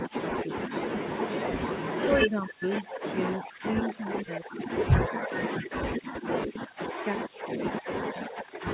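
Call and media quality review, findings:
Speech suppressed in double talk: the speech dips hard, around 40 dB at worst, at 0.07–0.9 s, 2.03–2.65 s and 3.08–3.78 s, then from 3.98 s to the end. Likely the echo canceller treating overlapping far-end talk as echo and ducking the near-end speech along with it. The narrowband sound, cut off at 4 kHz, fits a G.711 call path.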